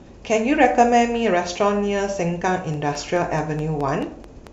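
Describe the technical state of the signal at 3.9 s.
A train of clicks runs from 2.74 s to 4.48 s, covering 3.9 s: about ten similar pulses at a regular 4.63 per second, peaking roughly as loud as the speech. It is likely interference from nearby equipment or a faulty connection or power supply, heard as steady ticking over the sound.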